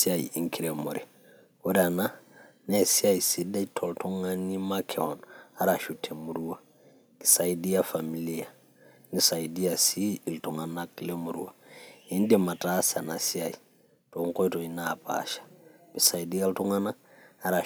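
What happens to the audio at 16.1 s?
Microphone overload at 16.05–16.07 s: a brief harsh crackle on a loud speech peak, likely from input gain pushing it about 3 dB past the converter's ceiling and flattening the tops.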